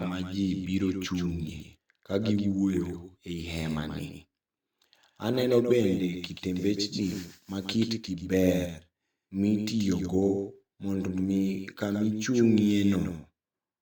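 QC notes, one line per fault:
throughout, doubled audio track: every sound is followed by a flat, full-band repeat about 150 ms later and roughly 5 dB quieter, heard as a clattering slapback on consonants and onsets rather than reverberation, since the repeat carries no decay or room colour. The likely cause is the same speech reaching the mix twice, once directly and again through a slower capture path, so two identical copies sit out of step by a fixed offset.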